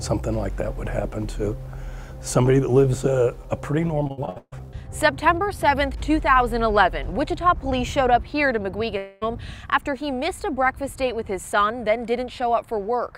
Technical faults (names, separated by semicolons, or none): repeated packet loss (robotic sound); long network dropout